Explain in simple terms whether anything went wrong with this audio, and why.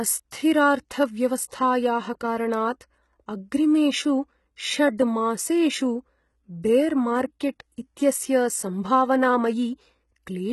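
Yes, something went wrong. The speech was most likely squeezed through HE-AAC compression, a format that stores only the lower part of the sound properly and then fakes the treble by copying lower tones upward. Here the squeeze is heavy and lasts from start to finish. The rebuilt top end doesn't match the real voice, so s sounds come out gritty, lispy or metallic, and nothing at all is left above about 12 kHz.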